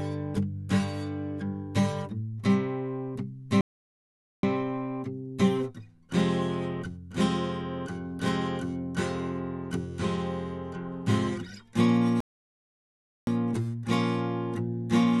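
The player likely ran dry of data or had its thread blocked twice in this music clip, causing a playback stall each time: the music cuts to silence from 3.61 to 4.43 s (about 0.82 s) and again from 12.20 to 13.27 s (about 1.07 s) before resuming.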